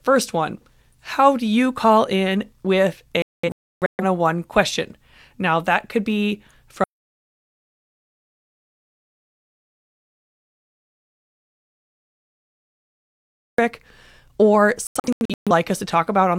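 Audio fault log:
3.22–4.03 s, digital broadcast dropout: right after "you call in with", the receiver loses lock or gets frames failing their checksum, so it mutes in a few short holes spread over roughly 0.77 s, about 0.64 s of audio gone in total, the longest single gap near 0.3 s. The choppy stutter is the decoder dropping bad frames and picking up again as good ones arrive.
6.84–13.58 s, audio dropout to silence: just after "that could be", the sound cuts off mid-flow and stays dead for about 6.75 s. It's silence, no room tone underneath, which tells you the recorder kept writing silence while the input was missing, likely a disconnected source or a dropped link. Whatever was spoken in that stretch is simply gone.
14.87–15.51 s, digital broadcast dropout: the same decoder muting again, this time a tighter cluster of holes across roughly 0.6 s, with about 0.38 s missing and no gap longer than 0.13 s. 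It comes across as a brief sputter rather than a clean cut, since the receiver is muting corrupted frames and letting the intact ones through in between.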